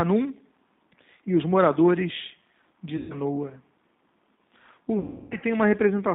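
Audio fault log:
throughout, G.729 codec: the speech sounds plainly rough and slightly synthetic, confined to a band of about 150 Hz to 3.7 kHz. The decoder rebuilds each 10 ms frame from a vocal tract filter, a pitch predictor and a few pulses, which fits an 8 kbit/s G.729 stream.
2.97–3.15 s and 4.99–5.37 s, VoIP packet loss concealed by the speech codec: the speech smears into a buzzy tone or coloured noise that fades, briefly at first and longer later, with weak, distorted speech afterward. The decoder extrapolated about 130 ms and 320 ms of lost audio from its last pitch and filter while lowering the gain.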